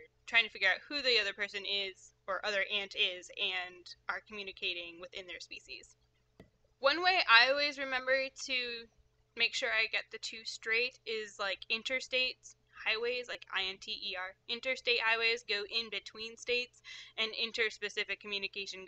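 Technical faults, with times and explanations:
13.33–13.35 s, repeated buffer: a brief buzzy click as a piece of sound only about 5 ms long repeats with a hard join each time, which points to four extra plays of one buffer. New audio arrived late, so roughly 20 ms of sound was lost.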